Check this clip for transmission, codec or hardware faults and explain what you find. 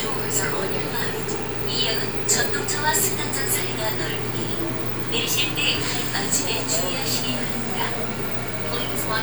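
One fault runs through the whole clip: low bit depth without dither. The likely cause is a stage that cut the audio down to about 6 bits by simply truncating each sample, with no dither to decorrelate the rounding error. Because that error tracks the waveform, it becomes a grainy distortion that shifts with the sound. It sits roughly 20 dB below the signal, so quieter passages turn gritty and the faintest detail sputters or drops out.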